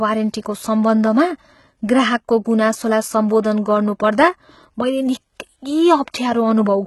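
Throughout the speech, heavy HE-AAC compression is likely: treble rebuilt from copied lower bands sounds gritty and lispy on s sounds, and a spectrogram shows nothing above 11.8 kHz.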